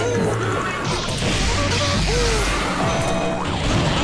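No technical faults can be heard anywhere in the sound.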